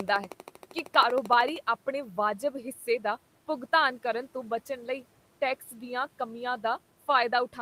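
A speech recording opens with a train of clicks. It runs from 0.00 to 1.57 s. The pops come at a steady 12.8 per second, about twenty in all. They land in gaps as well as over the speech, and peak around 15 dB above it. Their even spacing and matching shape point to a repeating electrical pulse. The likely source is interference from nearby equipment or a faulty connection or power supply. The speech is also cut by the noise suppressor in three places. From 0.31 to 0.88 s, short stretches are pulled down by about 10 dB. At 2.75 to 2.87 s, just before "ਦਾ ਭੁਗਤਾਨ ਕਰਨ ਤੋਂ", the drop is about 8 dB. At 5.61 to 5.74 s, just before "ਦੀਆਂ ਕਮੀਆਂ", it is about 7 dB. In each case the suppressor mistook quiet speech for background noise and lowered it. Those sounds come out swallowed and faint. The room noise sits about 27 dB below the speech.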